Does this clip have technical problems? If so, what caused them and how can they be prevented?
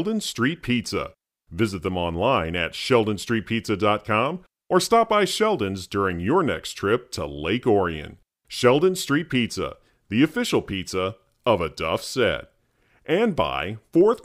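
No, there are no technical problems to report in this speech recording. With nothing gone wrong, there is no cause to explain and nothing that needs preventing.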